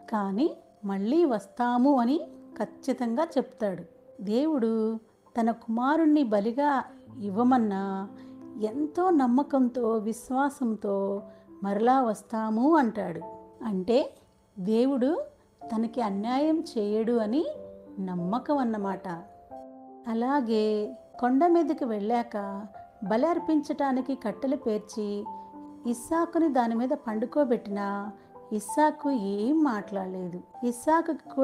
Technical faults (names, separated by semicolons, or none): none